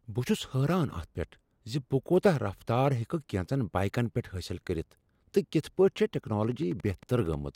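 From 6.44 to 7.34 s there's a train of clicks: about ten sharp, similar pops at roughly 12.4 per second, unevenly spaced and peaking around the level of the speech itself. It's likely interference from nearby equipment or a faulty connection or power supply injecting pulses.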